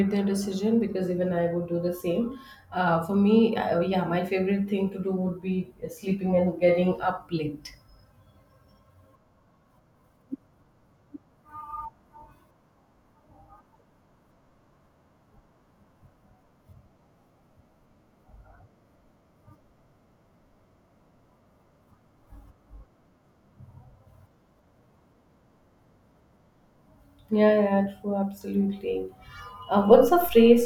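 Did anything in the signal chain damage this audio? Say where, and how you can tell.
Yes, a DC step at the converter or analogue input: at 29.92 s the waveform's zero line jumps by about -34 dBFS and holds there to the end of the clip. The sudden offset shift is heard as a low thump while the speech continues unchanged.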